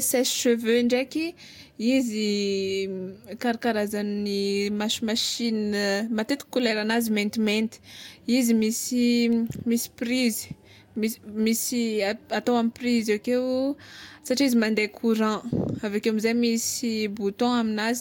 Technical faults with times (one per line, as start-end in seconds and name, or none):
none